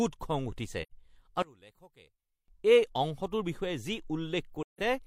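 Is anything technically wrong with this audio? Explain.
Yes. AAC frame loss with muting occurs at 0.82–0.92 s and 4.62–4.81 s. Zeroed frames leave soft-edged holes faded by overlapping windows, fitting about two and four lost frames.

One channel inverted is the likely cause from 1.42 to 2.48 s. The mono sum drops by about 24 dB, so the centred speech nearly vanishes into a faint residue.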